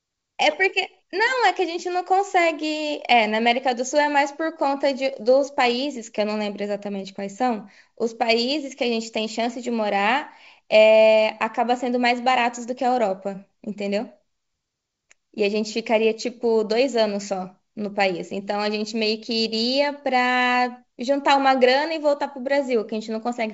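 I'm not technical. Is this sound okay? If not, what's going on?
Yes, nothing is wrong with this recording. It carries the full, clear sound of a good wideband phone call (G.722 wideband telephone coding), with the high end reaching about 7 kHz and at most a faint hiss in the upper range.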